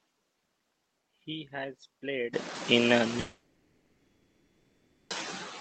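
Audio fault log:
3.20–5.12 s, long network dropout. Audio stops arriving for about 1.9 s, likely from lost packets on the call link. The receiver stretches the last sound into a brief fading buzz or hiss, then near-silence for about 1.7 s. Speech returns later, with the missing part gone.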